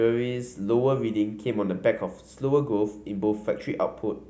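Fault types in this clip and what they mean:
No faults can be heard anywhere in this recording.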